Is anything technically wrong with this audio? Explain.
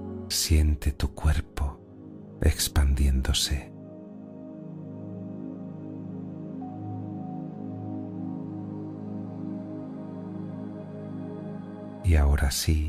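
No, nothing technically wrong can be heard here.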